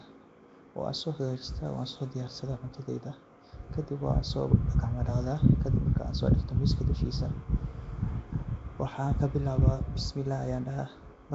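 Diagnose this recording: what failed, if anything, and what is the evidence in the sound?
Codec stage: the speech has a rough, hissy halo and a smeared, underwater quality throughout, with nothing above 7.7 kHz. This is likely Nellymoser compression, which starves weak bands of bits and fills them with noise. A spectrogram shows a hard 7.7 kHz ceiling and noise in quiet bands.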